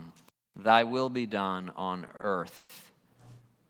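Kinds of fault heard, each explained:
Repeated stalls (stutter): from about 2.07 to 2.71 s, four brief hold-ups where late packets starved the jitter buffer. The gaps are stretched over with held sound, the longest around 130 ms.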